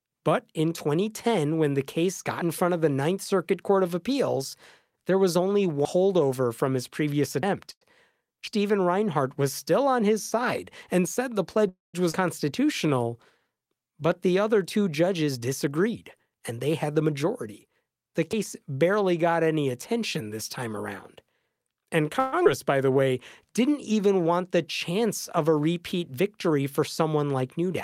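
Speech, with a run of transport and buffering faults. Jumps at 2.42, 5.85 (right after "there was only"), 7.43, 8.47 and 18.33 s are dropped buffers (overrun), likely from the program reading too late so the hardware overwrote its samples. Roughly a tenth of a second vanishes at most of them, about a third at 5.85 and 8.47 s, and the sound jumps with no silence at all. Those unfilled jumps are what separate them from the stalls. At 7.71 to 7.83 s a short stall from a late packet holds the last sound for about 99 ms, then resumes exactly where it stopped, so nothing is lost, only lengthened. A call audio freeze at 11.69 to 11.96 s is longer: the held sound fades into about 170 ms of silence across a 248 ms gap, likely because packets were delayed in transit. A second freeze at 22.19 to 22.34 s fills 129 ms with the fading held sound and never reaches silence. Unlike the overruns, both freezes add time rather than removing it. 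Skip ahead events at 12.12 s (about 0.2 s missing) and 22.44 to 22.47 s (about 70 ms missing) cut sound out with only a hairline seam. Jitter buffer slow-down from 12.45 to 14.28 s, ending just before "other two", runs at 90% speed. A shorter stretch from 22.86 to 23.47 s runs at 93%. Repeated pitch periods draw the sound out without lowering its pitch. Jitter buffer speed-up from 15.07 to 17.67 s (109%) and from 21.15 to 22.11 s (110%, just after "any attention this time") trims pitch periods, so the speech sounds hurried at unchanged pitch, the opposite of the slow-downs.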